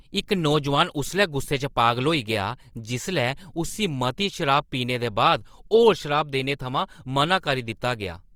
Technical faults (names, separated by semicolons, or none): Opus compression